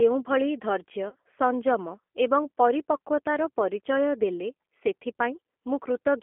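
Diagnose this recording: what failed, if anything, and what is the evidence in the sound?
The codec stage is the source of the constant damage: the speech passed through a low-rate CELP coder whose character fits G.729 at 8 kbit/s. Each 10 ms frame is rebuilt from a vocal tract filter, a pitch predictor and a handful of pulses, so the sound comes out rough and faintly synthetic. The damage is plainly audible from start to finish. The band is squeezed to roughly 250 Hz to 3.4 kHz, leaving no low body and no air.

On the network side, audio went missing around 30 ms, which fits a single lost packet, and the decoder had to conceal the gap. From 1.09 to 1.15 s the sound stretches into a brief, smeared buzzy tone or coloured noise and sags in level. The decoder kept extrapolating from its last pitch and filter settings with falling gain. Because each frame builds on the one before, the weakened or distorted quality runs past the gap itself before the speech fully recovers.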